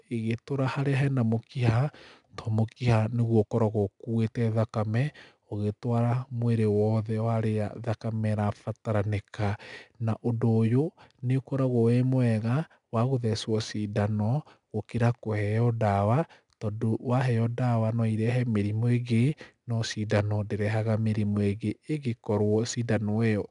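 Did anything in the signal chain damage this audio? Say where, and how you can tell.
Yes, at the codec stage: 4-bit ADPCM compression runs throughout, leaving a plainly audible gritty hiss that rises with the speech level. Nothing is present above 10.6 kHz, which points to a rate near 22 kHz, roughly 89 kbps at 4 bits per sample.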